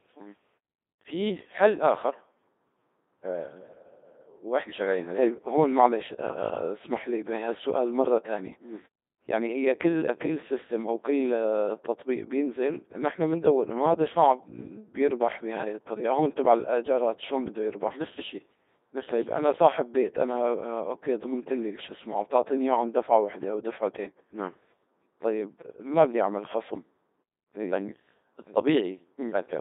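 Speech that sounds robotic and buzzy from start to finish, confined to a narrow band from 250 Hz to 3.7 kHz, with heavy damage throughout: the Codec 2 vocoder rebuilds the voice from pitch, voicing and a spectral envelope rather than keeping the waveform. The coarseness fits a rate around 2.4 kbit/s. The pauses fade cleanly to silence.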